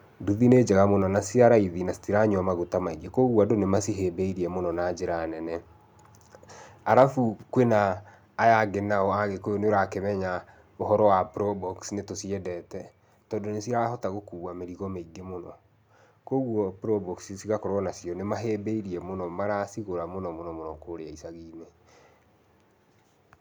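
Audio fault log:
6.97–7.03 s, microphone overload: for about 60 ms the loudest peaks of the speech are flattened, with a small fraction of samples squared off after the input overshot the converter's limit by about 1 dB. This is likely from input gain set too high, and the cut-off peak tops give a brief harsh crackle.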